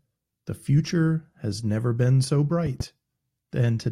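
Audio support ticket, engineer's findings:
Loud pop, two quick hits, 2.66 to 2.83 s after "has never been so", a few dB above the speech. Likely a plug or switch voltage spike; speech runs on underneath.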